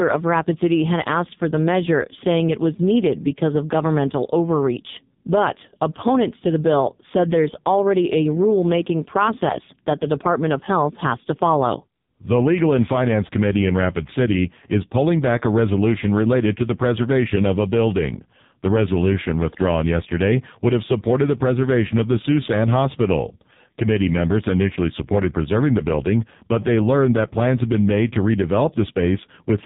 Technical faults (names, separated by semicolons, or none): AMR narrowband mobile codec